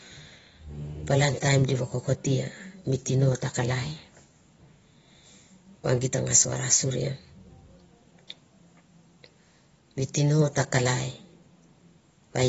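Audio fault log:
Throughout: AAC compression, likely a low-bitrate AAC-LC encode near 24 kbps. The speech sounds dull and smeared, with fizzy warbling on sibilants. A spectrogram shows a hard ceiling with nothing above 7.6 kHz.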